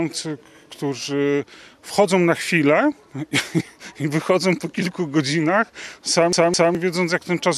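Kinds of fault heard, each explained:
CD stuck on one turn: a scratch makes the laser jump back one track, so a 0.21 s slice repeats twice with brief mutes, from 6.33 to 6.75 s.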